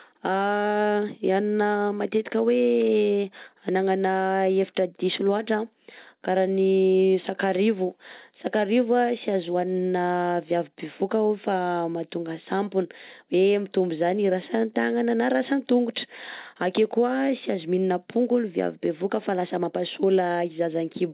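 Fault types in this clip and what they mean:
No faults are present in this speech recording.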